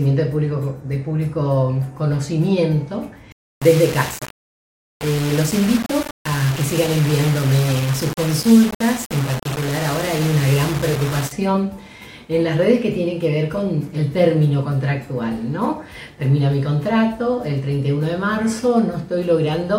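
From 3.32 s to 11.32 s the audio turns grainy, with a harsh distortion that tracks the signal and an error floor only about 10 dB down. This is likely low bit depth without dither, roughly 4 bits with plain rounding, so quiet sounds turn gritty.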